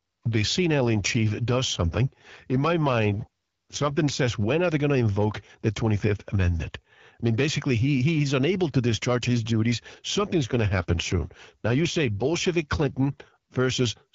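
From 0.7 to 4.14 s, just before "when are they going", and again from 9.99 to 13.31 s, after "to discharge his duties", an AMR rate drop leaves the band intact and gapless, but speech turns rougher and more synthetic, consistent with the wideband codec stepping down from 12.65 to 8.85 kbit/s.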